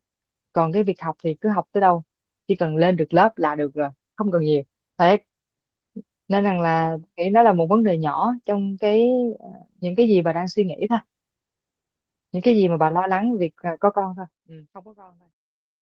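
No technical faults can be heard in this speech recording, and the level tapers off smoothly from around 14 s to the end, with no click or abrupt edge.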